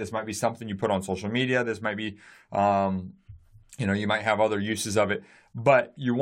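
No technical faults are audible anywhere in the recording.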